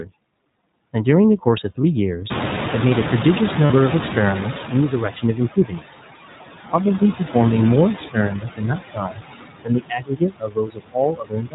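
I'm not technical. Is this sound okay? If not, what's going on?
No. Several processing faults are audible in this speech clip.

Noise suppressor artifacts run throughout. The filter that removes background noise keeps pulling it down frame by frame, so the leftover noise sinks between words and rises under them.

The iLBC codec, a narrowband phone-call codec working in 20 ms chunks, is also present throughout. It removes everything above 4 kHz, so the voice is muffled, slightly rough and synthetic.

Lost iLBC frames occur at 1.82 to 1.85 s and 3.66 to 3.71 s. Missing chunks were filled by repeating the last sound, giving a brief buzzy, held-vowel blip before the voice returns.

The noise suppressor is catching up from 2.3 to 5.12 s. The room noise jumps up around 2.5 s, and the suppressor takes nearly three seconds to adjust, so extra noise leaks through before settling.

Speech is cut by the noise suppressor at 5.56 to 5.82 s, 7.98 to 8.62 s, 8.78 to 9.24 s, 9.64 to 10.97 s, and 11.13 s to the end. 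The filter mistook parts of the voice for noise, so syllables and endings sound swallowed or faint.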